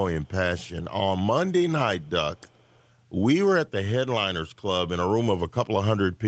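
Speech clip in which a far-end echo canceller likely let some loudspeaker pickup through, an echo leak: a very faint copy delayed 351 ms surfaces at 0.22–0.28 s, 1.99–2.10 s and 2.36–2.88 s.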